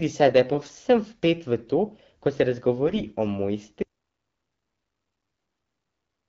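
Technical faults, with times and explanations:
3.83 s to the end: audio dropout to silence. The input feed was likely lost, perhaps through a disconnected device or a failed link, while the recorder kept writing silence. The speech, carried over an AMR-WB path at 12.65 kbit/s with its slightly band-limited HD Voice character, cuts off abruptly mid-flow and never returns. The remaining 2.5 seconds are total silence with no room tone or hiss, so whatever followed is simply gone.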